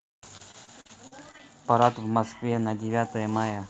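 From 0.37 to 1.41 s the sound turns choppy, with pieces that keep dropping out. This is repeated packet loss: eight gaps open up in that stretch, the longest about 42 ms, and each one is papered over by stretching the last good sound forward. Roughly a fifth of the span is synthetic fill rather than real audio, which is what gives it the choppy, stuttering texture.

Later come brief patches of roughness with no actual gap, at 2.09 to 2.11 s, 2.41 to 2.46 s, 2.50 to 2.52 s, 2.54 to 2.56 s and 2.58 to 2.60 s. Each is a 20 ms lost packet rebuilt from error correction: the following packet carried a low-bitrate copy, and the decoder played that instead. The copies sound grainier and noisier than the surrounding audio. On the 2.41 s event the repair added about 8 ms of extra length. The audio's top end stops at 8 kHz, which points to an Opus call codec running at around 32 kbps.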